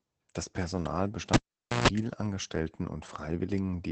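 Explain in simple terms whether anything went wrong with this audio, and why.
Throughout, the speech sounds muffled and a little hoarse, with nothing above about 8.7 kHz. That is Opus voice compression: to save space, the voice coder drops the highest frequencies and rebuilds the rest roughly, in 20 ms chunks, and that roughness is plainly audible here.

From 1.34 to 1.88 s there is a pop, about half a second of near silence, then a brief 60 Hz mains buzz lasting about 0.14 s and a second pop as the sound returns. That is a cable pulled and plugged in: unplugging cut the signal, and the plug's tip caught hum while being pushed back.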